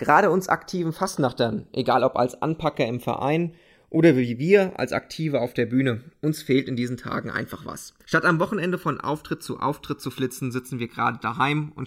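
From start to finish the two channels are drifting apart: they run on separate clocks, off by something like 70 ppm, so the delay between them creeps up to about a millisecond. Summed to mono, the comb notches sweep slowly, giving the speech a slow flanging swirl.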